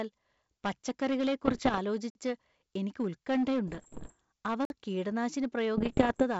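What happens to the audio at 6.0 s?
At 6.0 s the sound falls inside a burst of bit errors on an ADPCM link, from 5.77 to 6.24 s, just after "അവ കീടനാശിനി". Flipped bits, around one to two percent of them, derail the decoder's predictor and step size, producing pops, rough bursts and brief level jumps. Hard clipping runs throughout as well: the signal is overdriven by about 10 dB, so a few percent of peaks are cut flat and crackle harshly.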